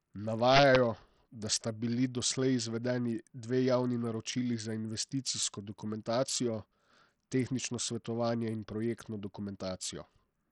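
Throughout the speech, the treble stops at about 11.7 kHz and the band below it is gritty and heavily quantised, with aliasing riding on the sound. This is likely Bluetooth SBC compression starved of bits, which fits a bitrate around 64 kbps.

From 0.51 to 0.76 s, integer overflow produces hard, violent cracks, far sharper than clipping. The signal was driven about 4 dB past the integer limit, and instead of being held there, each peak wrapped around to the opposite sign across the full range.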